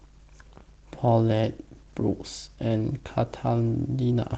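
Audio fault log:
Throughout: Opus voice compression at 16 kbps, hybrid mode. SILK coarsely codes speech below 8 kHz and CELT covers above, leaving audible hoarseness and robotic edges.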